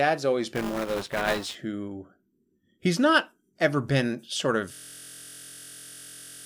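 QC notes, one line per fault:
0.54–1.55 s, buffer tearing: a 200 Hz robotic rattle where about a tenth of each buffer replays audio around 15 ms old. It tracks the signal and never freezes it.
4.74 s to end, system hang loop: just after "not ever been sort", a 23.22 ms slice repeats identically, a steady 43.1 Hz buzz that fits a 1024-sample buffer. The audio stops moving forward.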